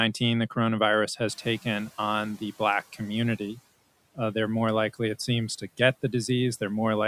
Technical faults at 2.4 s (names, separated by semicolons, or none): noise suppressor catching up